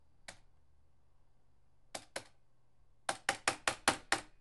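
No technical faults are audible anywhere in this recording of sounds.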